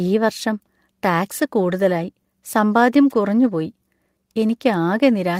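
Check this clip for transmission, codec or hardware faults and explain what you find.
No faults detected here.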